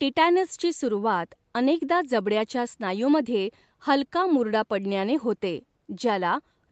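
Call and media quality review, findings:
No faults found in speech.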